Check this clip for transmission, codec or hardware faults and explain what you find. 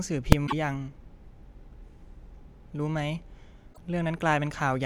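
Three faults of two kinds turn up in this speech clip: one full-scale bang near the start and two short disruptions consistent with damaged MP3 framing.

Invalid numbers at full scale, at 0.32 s: a calculation produced infinite or invalid values, and these were clamped to the largest sample value the format allows, holding the output at full scale for about 2.67 ms, which fits a 128-sample processing block. Because the block is so short, the pop at its start and the pop at its end merge into a single very loud bang.

Broken MP3 bit reservoir, from 0.46 to 0.53 s and from 3.72 to 3.78 s: the speech jumps ahead and the next stretch comes out disturbed, lasting about 70 ms and about 52 ms respectively, or two to three 26.1 ms frames. The likely cause is missing frames. An MP3 frame can store part of its data in earlier frames. When some frames are lost, the frame after the gap looks back for its data, finds bytes from a different frame, and decodes that mismatched data until the stream realigns.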